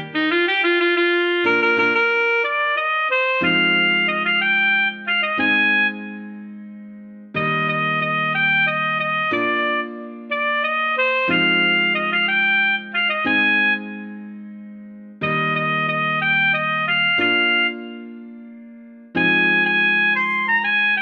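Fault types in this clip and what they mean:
Nothing stood out on listening to this clip.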